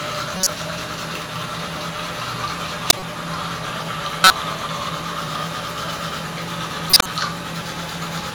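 At 0.37 to 0.47 s, 2.90 to 3.03 s, 4.24 to 4.31 s and 6.90 to 7.09 s, a corrupt frame decoded produces a short, loud chirp or noise burst, peaking around -5 dBFS. Flipped bits in each compressed frame led the decoder to apply wrong gains and codes, spraying energy into unrelated frequencies over a few frames. Unlike a lost frame, which brings a gap or a smeared repeat, these bursts are new, foreign sound.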